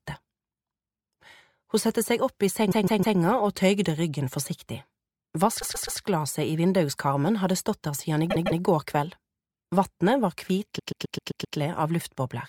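Repeated frames stutter the sound four times. From 2.71 to 3.18 s, a 157 ms block plays three extra times. From 5.61 to 6.00 s, a 131 ms block repeats three extra times. From 8.30 to 8.61 s, a 157 ms block repeats twice more. The longest is from 10.78 to 11.56 s, where a 131 ms block returns six extra times. A run of compressed frames was delivered more than once, so the decoder replays it. Together the repeats add about 2 s.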